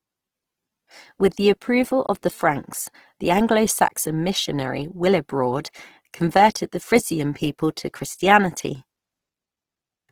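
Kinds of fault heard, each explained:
Opus compression: speech sounds rough and grainy, likely from Opus music-mode coding at about 16 kbps; the spectrogram shows noise-filled bands instead of clean harmonics.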